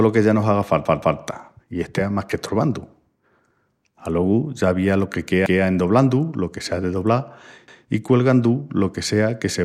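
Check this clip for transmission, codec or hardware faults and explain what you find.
Three repeated buffer faults occur in this speech. At 0.85 to 1.20 s, just after "que ya no haga", one chunk of about 171 ms plays three times in a row. It happens again once each at 5.46 to 5.63 s, after "ya avía lo que", and at 7.68 to 7.85 s, before "i cuelgandu lo que". Fresh audio arrived late, so playback repeated the last chunk. That fits an 8192-sample buffer. Each repeat joins abruptly, giving a short stutter with hard edges.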